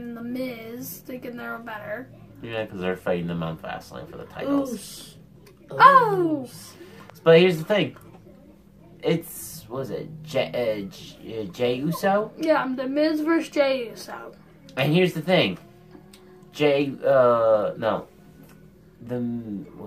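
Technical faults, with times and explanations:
Nothing stood out as a technical problem on listening.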